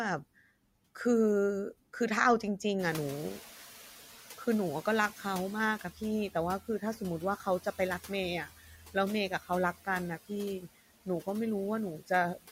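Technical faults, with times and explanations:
Throughout: noise suppressor artifacts. The suppressor lowers the background by about 6 dB frame by frame, so the residual noise dips between phrases and rises under them. On a spectrogram the noise floor looks mottled, with patchy holes.
2.79–5.83 s: noise suppressor catching up. The room noise jumps by about 18 dB near 3 s. The suppressor's estimate lags, so the louder noise comes through at first, then sinks by about 8 dB over roughly 3 s. A spectrogram shows a bright broadband band fading gradually.
5.81–6.35, 6.66–7.01, 7.37–8.10, 8.47–8.95, 9.29–9.87, 10.18–11.27 and 11.98–12.47 s: speech cut by the noise suppressor. Louder noise, only about 18 dB under the speech, makes the suppressor take parts of the speech for noise. Those parts drop by about 10 dB at first and up to about 18 dB by the end. In each span a short stretch, about a tenth to half a second, sounds swallowed. 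On a waveform these stretches show as thinned envelopes, and on a spectrogram as missing energy.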